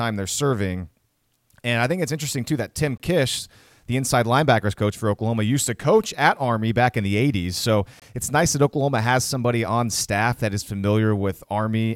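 Gap between chunks at 2.98 to 3.00 s and again at 8.00 to 8.02 s: the speech was carried in 5-second chunks, and each join leaves 21 ms of silence. Nothing is lost, but the sound stops abruptly in a short hole, then resumes.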